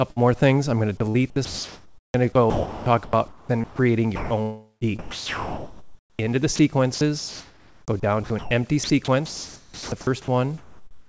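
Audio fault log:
0.11–0.19 s, burst of packet loss: About 53 ms of the gap is covered by the receiver repeating the last bit of sound and letting it fade, which gives a short held buzz or thinning hiss. Then the audio jumps ahead, with about 60 ms simply gone. It is a single event with a decaying tail. That sets it apart from the voice-detector chopping later, which repeats and swaps in steady synthetic noise rather than a fading copy of what came before.
1.09 s to the end, sound chopped by the voice detector: The audio keeps cutting in and out. Quieter stretches and the edges of sounds are replaced by comfort noise of the RFC 3389 kind, about 5.6 s of it in all. The likely cause is the sender's voice detector repeatedly deciding there was nothing worth sending. Unlike packet loss, the gaps hold no echo of the preceding sound, and the switching recurs through the whole stretch. This sits on top of the G.722 call codec, which leaves nothing above 8 kHz.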